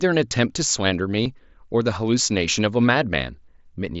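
A speech clip carried over a wideband mSBC Bluetooth headset link, with a single fault: concealed Bluetooth headset packet loss from 1.24 to 1.26 s. For about 22.5 ms, which fits roughly three lost frames, the receiver filled the gap by repeating the closest-matching recent stretch of waveform, so the sound holds a brief buzzy tone at full level and warbles slightly as real audio resumes. A plain dropout would fall silent and a click would be instantaneous, whereas this gap is filled with sustained, level-matched tone.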